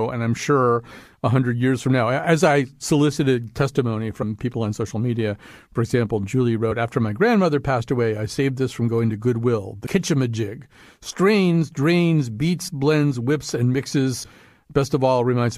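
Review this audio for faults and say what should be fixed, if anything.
Compressed frames are skipped at 4.21 s after "as I solicited testimony", from 12.67 to 12.69 s after "strains drains", and at 14.23 s after "blends whips and". Each time one or two frames vanish, tens of milliseconds, leaving the audio jumping ahead. Re-encode from the source and verify file integrity.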